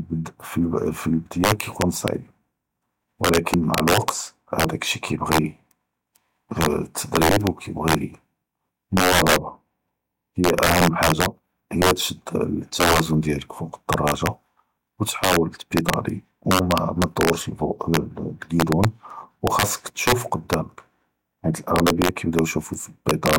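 Speech throughout carries integer overflow: gain pushes loud peaks about 5 dB past the integer limit, and under one percent of samples wrap to the opposite sign instead of being held, giving violent cracks on louder syllables, seen as sign-flipped spikes and bright vertical broadband streaks.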